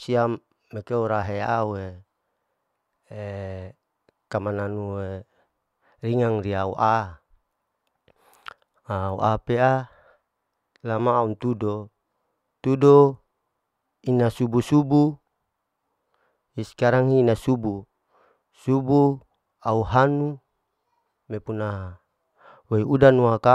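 No technical faults can be heard in this recording.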